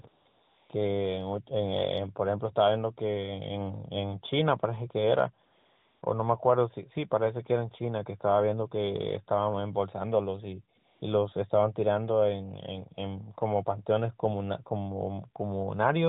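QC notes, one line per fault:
0.02–0.04 s, 0.08–0.26 s, 0.28–0.70 s, 5.46–6.02 s and 10.78–11.02 s, AMR comfort noise: the sending phone's voice activity detection treated these stretches as silence and stopped transmitting speech frames, so the receiving end filled each gap, from 20 ms up to 560 ms, with synthetic noise built from a rough level and spectral estimate. The real background drops out and is replaced by a smooth, even hiss that cuts in and out at the gap edges, heard through the band-limited AMR narrowband mobile codec path.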